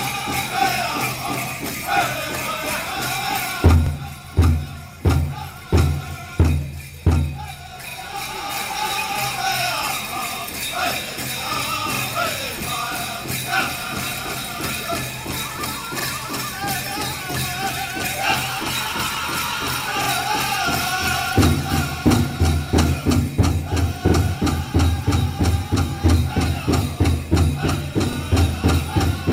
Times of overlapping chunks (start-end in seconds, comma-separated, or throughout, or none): 3.86-3.91, 7.91-7.95, 11.95-12.00, 20.04-20.08, 24.08-24.13, 28.13-28.17